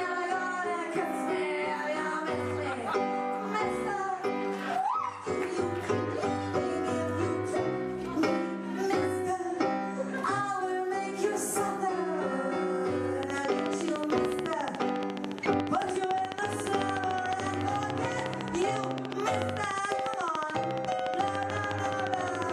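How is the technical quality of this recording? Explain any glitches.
The recording has one clear problem in its second half. From 13.23 s to 22.51 s there is a train of clicks. Regular pulses arrive about 13.9 times per second, roughly 150 in all. Each click has much the same shape and peaks around 15 dB above the sound. The likely cause is interference from nearby equipment or a faulty connection or power supply. It is heard as steady ticking laid over the sound and through its pauses.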